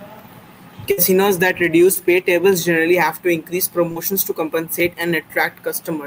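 At 0.91 to 0.99 s there is a burst of packet loss. Several consecutive packets of this speech failed to arrive in time, so the receiver stretched the last sound for about 60 ms while fading it. The audio then picks up about 60 ms further on, and that stretch is simply gone. The audible jump forward and the decaying tail separate it from the shorter losses that follow.

Short concealed packet loss occurs twice. At 1.93 to 1.97 s, just before "paytables generally have to", about 20 ms went missing and the decoder synthesised a continuation from the preceding sound, heard as a quick smear. At 3.91 to 3.98 s, between "generally have to increase" and "to compensate", about 40 ms was patched the same way, giving a slightly longer wobble. Both blend smoothly back into the real audio without the fade and jump of the burst.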